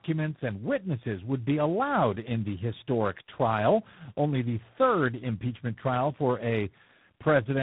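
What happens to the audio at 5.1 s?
At 5.1 s you're hearing tandem speech coding, and it runs through the whole clip, not just that moment. The speech sounds like it was decoded and re-encoded at several network borders, roughly three speech codecs stacked up, each one chewing on the previous one's already damaged output. The result is rough, muffled and warbly, with nothing left above 3.8 kHz.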